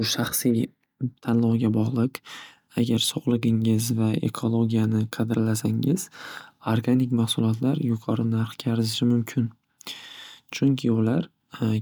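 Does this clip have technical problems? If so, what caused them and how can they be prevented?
No, this clip has no technical problems, so there is nothing to prevent.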